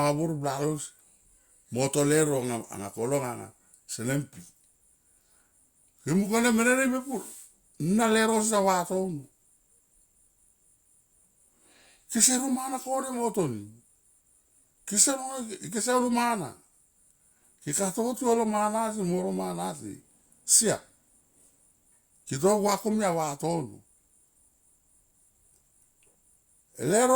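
No technical faults can be heard anywhere in the speech.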